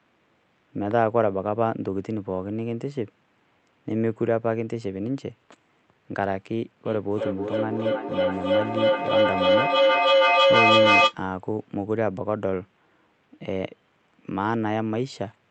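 From 6.85 to 11.18 s, feedback howl: a mic-to-speaker loop gaining level each pass builds a tone near 500 Hz, pulsing roughly every 0.3 s, about 7 dB above the speech.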